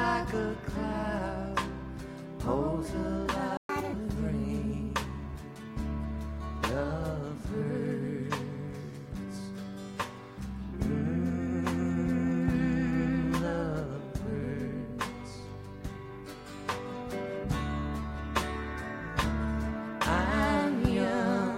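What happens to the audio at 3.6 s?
The sound cuts out from 3.57 to 3.69 s, a gap of about 120 ms: a playback stall, likely the player running short of data or being blocked. From 3.69 to 3.93 s it then runs at 1.5 times speed, pitch raised by about seven semitones, as the player plays through its backlog in a catch-up at higher speed before returning to normal.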